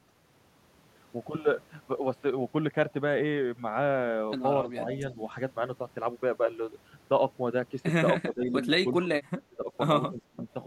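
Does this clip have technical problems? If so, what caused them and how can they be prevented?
Yes. The speech dips at 4.73–4.85, 8.24–8.56, 8.84–9.16, 9.38–9.72 and 10.11–10.47 s, by as much as about 25 dB. This is likely speech suppressed in double talk: the echo canceller turned down the near talker along with the echo. Better double-talk detection, or a headset, prevents it.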